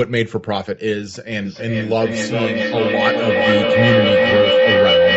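Speech with a feedback howl kicking in at 1.45 s and running right to the end of the clip. It sounds like two devices in the same room sharing a call: the loop from mic to loudspeaker and back gains level each trip, so the sound narrows to a tone around 500 Hz that pulses roughly every 400 ms and climbs to about 6 dB above the speech. The call path's top end stops at 8 kHz.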